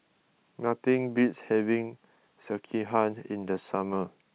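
No technical faults are audible.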